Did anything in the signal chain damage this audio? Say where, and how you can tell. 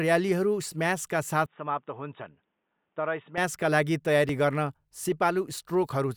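Yes. From 1.46 to 3.38 s the speech goes dull and boxy, with nothing above 3.8 kHz, drops a few dB, and picks up faint new background noise, then snaps back with no gap. That points at the driver stage, likely an input switched to a poorer device.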